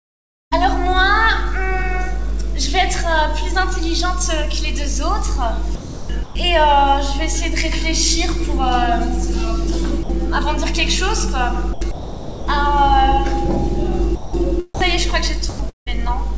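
Audio carried over a call path that cuts everything above 8 kHz, consistent with G.722, shows two voice-detector faults. Sound chopped by the voice detector occurs at 5.75–6.35 s, 11.73–12.47 s and 15.49–16.08 s, where the audio has holes filled with comfort noise, likely from the sender's detector toggling transmission repeatedly. Sound dropped by the voice detector appears at 10.03–10.09 s, 14.15–14.33 s and 14.75–14.81 s, with brief gaps of 60 to 180 ms filled by steady comfort noise, likely because quiet passages were classed as background and not sent.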